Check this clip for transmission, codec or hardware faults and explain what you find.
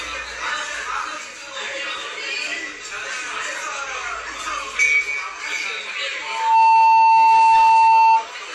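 One hardware fault appears: loudspeaker feedback squeal, from 6.22 s to 8.28 s. A microphone is picking up the loudspeaker it drives, and at 896 Hz the gain around that loop rises above unity, so the tone feeds on itself. It swells out of the sound in about 0.4 s into a steady, piercing whistle that stands roughly 15 dB above everything else and holds for around two seconds.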